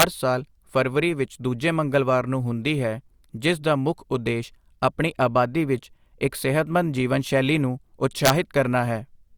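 Right at the start, from 0.00 to 0.03 s, and again at 8.25 to 8.30 s, there's integer overflow: peaks pushed about 3 dB and about 2 dB past the limit wrap around to the opposite sign instead of clipping, so you get harsh, violent cracks.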